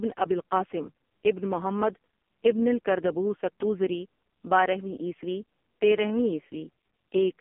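Speech runs through the AMR narrowband mobile codec for the whole clip, with heavy damage: the voice sounds buzzy and synthetic, which fits AMR-NB's lowest 4.75 kbps mode. A spectrogram shows a flat ceiling at 3.4 kHz and nothing below 200 Hz.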